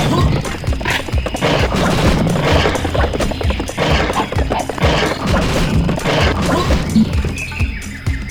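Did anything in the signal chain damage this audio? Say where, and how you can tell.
No, the signal chain caused no damage.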